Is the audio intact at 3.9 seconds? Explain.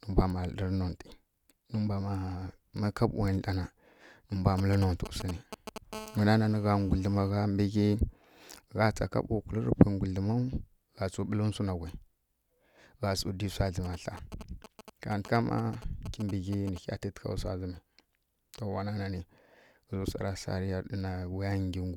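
Yes, at 3.9 seconds the speech plays through cleanly with no audible fault.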